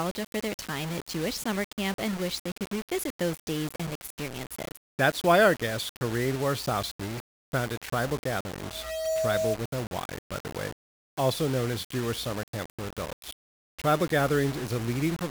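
From start to finish, the speech sounds grainy and rough. Quiet passages turn gritty, and the faintest sounds sputter or drop out. The likely cause is low bit depth without dither, which fits rounding to about 5 bits. The error tracks the speech and sits roughly 15 dB below it.

At 8.59 s a loudspeaker feedback squeal begins. A microphone is picking up its own loudspeaker, and the loop runs away at 640 Hz. The tone swells over about half a second, ends a few dB louder than the speech, and cuts off at 9.60 s.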